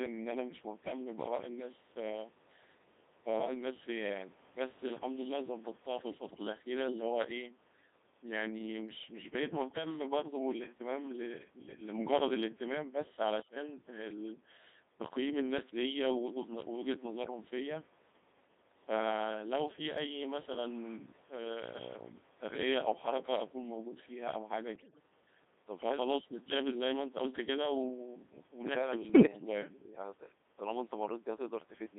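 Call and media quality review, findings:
Codec 2 vocoder, throughout: robotic, buzzy speech, band-limited to 200 Hz–3.7 kHz, heavy damage. Sine-wave resynthesis from pitch and envelope, not waveform coding; constant, unlike packet loss. Sound fits a 2.4 kbit/s mode.

Bit errors on digital voice radio, at 9.70–9.86 s, 13.40–13.56 s, 24.76–25.03 s, 29.10–29.26 s: bleeps, warbles, pitch and level jumps. Corrupted vocoder parameters at a few percent bit error rate; garbled rather than silent, unlike dropouts.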